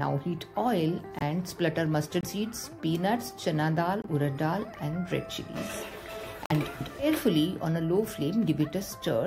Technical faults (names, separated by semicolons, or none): corrupt frame muted